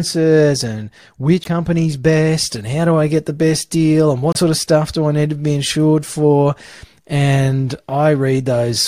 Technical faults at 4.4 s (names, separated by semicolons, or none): broken MP3 bit reservoir